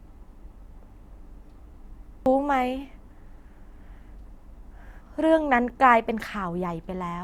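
Speech with one abrupt skip at 2.26 s. About a third of a second of audio is missing, and the two sides butt together with no gap. This is audio missing between chunks, likely from a recorder working in 3-second blocks and dropping material at the handover.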